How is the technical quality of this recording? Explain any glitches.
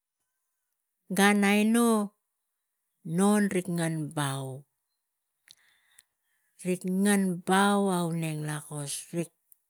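No glitches or faults detected.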